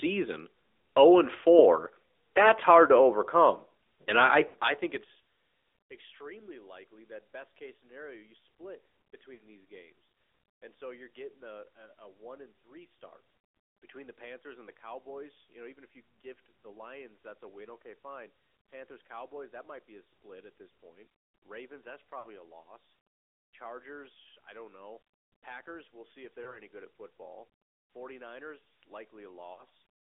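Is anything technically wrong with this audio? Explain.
Yes. The whole recording passes through the AMR narrowband mobile codec. Energy is confined to roughly 300 Hz to 3.6 kHz, so the speech is thin and boxy with no air on the sibilants. The coder rebuilds each 20 ms stretch from a vocal-tract model and a handful of excitation pulses, which gives the voice a plainly audible buzzy, synthetic edge, consistent with a mid-rate mode around 10 kbps. A plain low-pass or telephone-band filter would narrow the sound in the same way but would leave the voice natural rather than vocoded.

There are also lost AMR speech frames, heard as brief smeared dropouts at 4.48–4.56 s (after "to overcome and I", before "I think it's"), 9.34–9.43 s (after "case scenario you split", before "these games and so"), 22.20–22.25 s (just before "a loss"), 26.44–26.59 s and 29.54–29.64 s. In each case the decoder stands in for the missing audio by reusing the last pitch and vocal-tract settings at falling gain. 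The result is a short drawn-out warble that sags in level, not a hard click or silent gap as with dropped packets in uncompressed audio. The gaps at 4.48 s and 9.34 s fit three missing frames each, and the voice comes back weak or rough for a moment.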